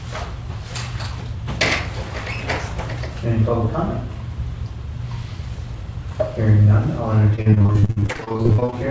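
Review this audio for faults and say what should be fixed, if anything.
Repeated packet loss (robotic sound) runs from 7.36 s to 8.74 s, near the end. The audio turns choppy. Holes arrive a couple of dozen times in quick succession, the longest about 55 ms. Each one is patched by stretching the last sound, and the next loss follows before the signal recovers. Close to half of that stretch is concealment. The band stays capped at 8 kHz, as expected for G.722 at 64 kbps. Preventing this needs a steadier network path, forward error correction, or a deeper jitter buffer.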